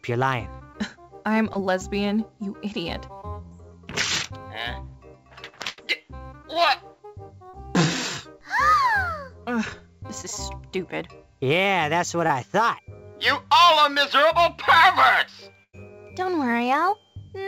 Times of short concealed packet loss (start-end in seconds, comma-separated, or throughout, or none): 1.54-1.57, 3.49-3.53, 7.50-7.55, 10.21-10.26, 12.28-12.31